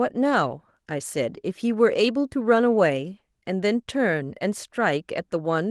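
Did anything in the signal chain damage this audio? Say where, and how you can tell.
No, nothing in the signal chain damaged this audio.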